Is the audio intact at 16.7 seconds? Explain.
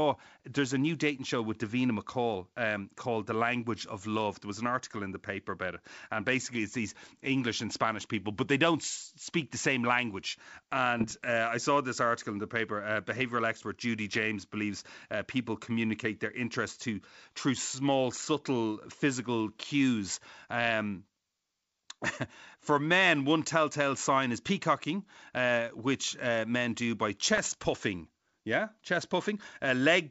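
Yes, the audio is intact at 16.7 seconds; the speech there passes through G.722 wideband telephone coding at 64 kbit/s, which leaves it clear up to about 7 kHz with at most a faint hiss in the upper band.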